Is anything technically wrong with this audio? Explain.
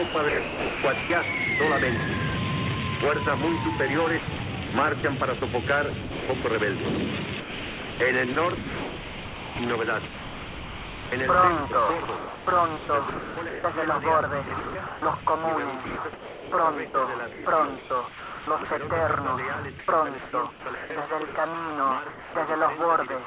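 Yes. Two related faults come from the sender's voice activity detection, heard through a narrowband call path that carries nothing above 4 kHz.

Sound chopped by the voice detector occurs seven times: 0.08–1.1 s, 4.19–6.44 s, 7.4–11.12 s, 12.05–13.64 s, 14.48–15.26 s, 15.86–18.71 s and 19.79–21.35 s. The sender's detector likely toggled transmission on and off repeatedly within each stretch, misjudging quieter parts as background. Those gaps were filled with synthetic comfort noise: about 0.69, 0.54, 2.73, 0.87, 0.36, 1.26 and 0.63 s respectively. The sound turns choppy, with holes where it was replaced.

Sound dropped by the voice detector occurs at 22.1–22.34 s. Here the detector likely classed a quiet part of the sound as background and stopped sending. The receiver substituted comfort noise for 240 ms, and about 190 ms of actual sound is lost. The audio cuts to steady noise and does not resume until the detector triggers again.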